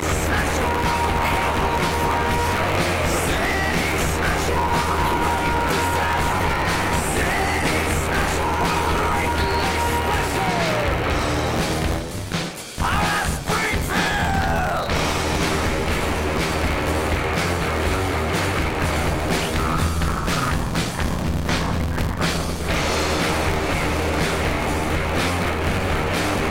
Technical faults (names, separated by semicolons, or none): buffer tearing